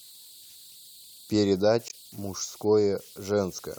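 Throughout the speech, converter idle tones sit under the signal, about 26 dB down: a thin whistle around 4 kHz, strongest in pauses. An undithered delta-sigma converter locks into repeating bit patterns at low levels. A spectrogram shows a steady narrow horizontal line there.

From 0.62 s to 3.13 s, a regular tick recurs every 0.93 s, about four times. This is likely clock drift buffer slips: two clocks a couple of hundred parts per million apart force the buffer to drop or repeat a handful of samples. The waveform shows tiny discontinuities, and the spectrogram shows faint vertical lines.

Between 1.87 s and 1.94 s, a short squawk marks damaged data in a compressed stream. The decoder misreads corrupt frames, loses sync and hunts for the next header. A spectrogram shows a smeared broadband blotch, and the waveform shows a jagged break.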